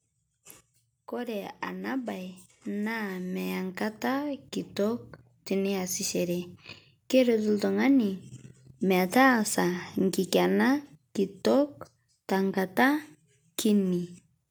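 From 1.1 s to 6.54 s, automatic gain rising lifts the speech about 10 dB; background swells with it, unlike a deliberate fade or louder talking.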